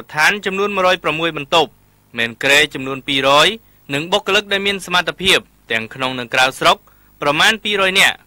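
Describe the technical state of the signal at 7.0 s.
At 7.0 s the signal shows hard clipping, present throughout the clip. It is driven about 3 dB past what one stage can pass, so the loudest peaks are sliced flat. Under one percent of samples are affected, so it is heard as brief crackle on peaks.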